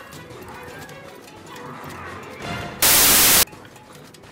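At 2.82 s the audio turns into a burst of harsh, loud broadband noise until 3.43 s. That's samples built from the wrong bytes: the reader misassembled each sample, so the jittery low bits end up driving the values, and the original sound is buried under noise.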